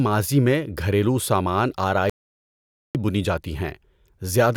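Speech with an audio dropout to silence from 2.10 to 2.95 s: plain silence, no room tone, unlike gating; likely a lost input.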